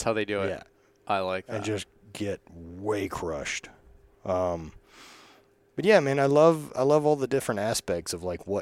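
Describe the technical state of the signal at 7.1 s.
At 7.1 s the speech signal is intact, with no audible dropout, distortion, glitch or other technical fault at that moment.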